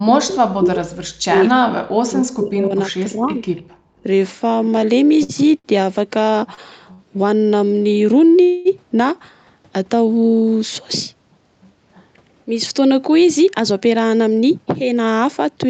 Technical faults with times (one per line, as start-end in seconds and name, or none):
0.00-0.78 speech suppressed in double talk
1.27-3.43 speech suppressed in double talk
3.56-3.62 echo leak
3.71-4.03 background gated by the echo canceller
5.23-5.32 short stall from a late packet
5.59-5.67 short stall from a late packet
6.54-6.60 short stall from a late packet
6.93-7.02 short stall from a late packet
8.43-8.68 call audio freeze
13.07-15.45 jitter buffer speed-up